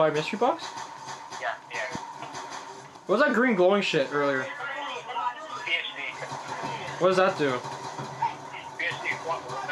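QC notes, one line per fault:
1.95–1.98 s, loud pop: a single sharp pop about 23 ms long sits a few dB above the surrounding sound, which carries on underneath. It is likely a brief voltage pulse, such as static or a switch. On a spectrogram it shows as a thin full-height vertical stripe, and on the waveform as a narrow spike.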